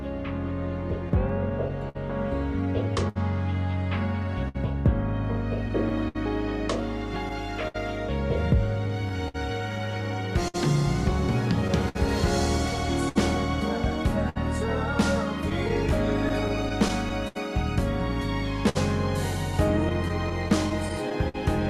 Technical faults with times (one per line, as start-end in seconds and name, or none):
0.00-21.70 clock drift between sender and receiver
1.09-21.36 scattered short gaps